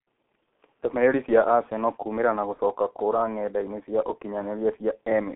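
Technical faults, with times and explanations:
throughout: G.723.1 codec. The sound is muffled and hoarse, with smeared consonants and heavy codec damage. Nothing passes below 200 Hz or above 3.5 kHz. The coarse, slowly updated voice model fits a rate of about 6.3 kbit/s.
2.54–2.59 s: VoIP packet loss concealed by the speech codec. Right after "kũũmĩra na", the sound is briefly stretched and fades. The gap points to one lost 30 ms frame. The decoder stretched its last pitch and filter, then recovered slowly.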